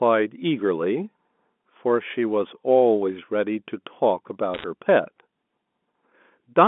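Telephone speech, carried over G.711 mu-law with a band of roughly 200 Hz to 3.5 kHz, has a brief burst of bit errors on a digital phone line from 4.54 to 4.64 s. At a rate of around one or two percent, flipped bits corrupt single samples and cause sharp crackly ticks. These show as isolated needle spikes on the waveform and thin vertical streaks across the spectrogram.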